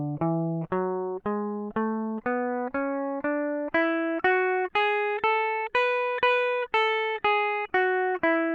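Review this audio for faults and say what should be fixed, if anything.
Nothing here needs fixing; the music comes through without any faults to flag.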